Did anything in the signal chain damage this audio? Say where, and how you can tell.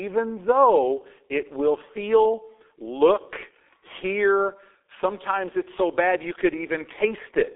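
Yes. The G.723.1 codec stage damaged it, for the whole clip. The band sits at roughly 300 Hz to 3.6 kHz with nothing above 3.8 kHz, pointing to a low-rate mode near 6.3 kbit/s. Its coarse frame-by-frame speech model leaves the speech muffled and hoarse, with smeared consonants.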